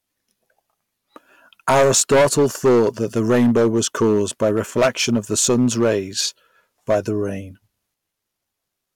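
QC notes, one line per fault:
Throughout, hard clipping: the speech is driven about 14 dB past what the signal path can carry, so every loud syllable has its peaks sheared off flat, and roughly one sample in twenty is clipped flat. Those squared-off tops generate a spray of upper harmonics, giving a harsh, buzzy fuzz on all stressed sounds. On the waveform the peaks form flat plateaus. On the spectrogram, broadband energy smears up into the high kHz range above each loud syllable.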